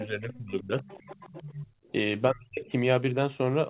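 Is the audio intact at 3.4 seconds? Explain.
Yes, the speech at 3.4 seconds is intact, with no dropout, glitch or other fault at that moment.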